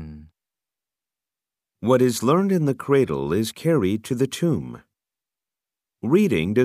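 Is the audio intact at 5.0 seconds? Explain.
Yes, the speech at 5.0 seconds plays through intact, with no dropout, glitch or other fault at that point.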